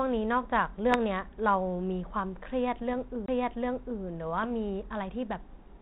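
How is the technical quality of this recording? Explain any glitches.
The recording is narrowband speech that carries two kinds of glitch: three short rough bursts and one jump in the playback. The narrowband sound, with nothing above 4 kHz and only light coding damage, fits G.726 ADPCM at around 32 kbit/s.

At 0.91 to 0.99 s, 2.79 to 2.85 s and 4.43 to 4.47 s there are pops and gritty bursts with brief level wobbles. These are bit errors on an ADPCM link. The error rate is very low, but each flipped bit throws the decoder's step size and prediction off, so the damage rings on for some milliseconds instead of staying a single click.

At 3.26 s a dropout of roughly 20 ms is followed by the speech resuming from a different point. This is a CD skip: the laser jumped to another turn of the disc spiral, and the player muted briefly before carrying on from the new position.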